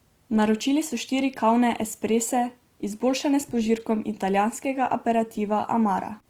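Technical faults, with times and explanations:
Throughout, Opus compression: the speech sounds grainy and rough, with noise-filled bands, likely from CELT-mode encoding at a low rate, which fits around 24 kbps.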